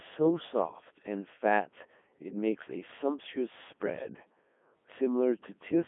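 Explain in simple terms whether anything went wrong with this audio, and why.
Codec 2 vocoder damage runs through the whole recording, from the first second to the last. This is a very low-rate digital-radio voice codec. Instead of sending the actual sound wave, it sends only a rough description of the speech: its pitch, loudness, whether it is voiced, and its overall tone shape. The receiver then rebuilds a voice from simple tones. Here the damage is heavy, so the speech sounds robotic and buzzy, and everything above about 3.7 kHz is gone, leaving it narrow like a radio call.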